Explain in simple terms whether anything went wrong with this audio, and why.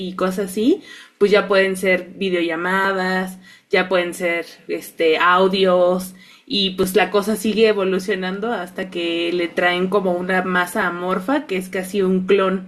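Audio missing between chunks: the recorder likely handles sound in two-second pieces and drops a tiny sliver each time it switches. You hear brief skips, possibly with a click, at 0.85, 2.85, 6.83, 8.83 and 10.82 seconds.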